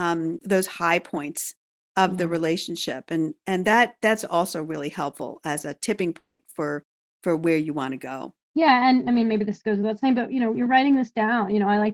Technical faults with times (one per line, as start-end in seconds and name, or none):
6.19-6.42 long network dropout